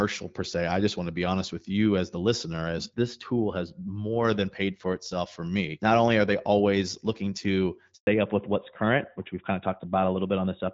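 From 2.85 to 4.25 s, between "you as the listener" and "than paid for itself", one channel lags the other by a few samples and the two sum to mono. This channel delay causes comb filtering, with the first notch around 7 kHz, so the speech turns hollow and phasey. At 7.95 s, after "they always looking to", a handover gap occurs as the call switches networks and no frames arrive, leaving 120 ms of silence. From 8.07 s to the end, a fallback to narrowband takes the call from AMR-WB at 12.65 kbit/s to AMR-NB at 12.2 kbit/s. Nothing above 4 kHz survives, so the voice sounds duller and rougher than the lightly coded HD Voice before it.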